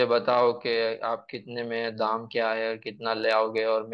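No technical faults can be heard in this speech recording, so there are none to describe in time order.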